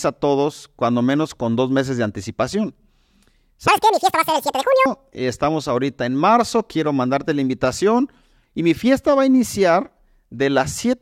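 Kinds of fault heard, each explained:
Section at the wrong speed: from 3.68 to 4.86 s, just before "estamos ahorita en marzo", the speech runs 1.97 times too fast and jumps roughly ten semitones higher, sounding shrill and hurried. This is likely that stretch being played against the wrong clock.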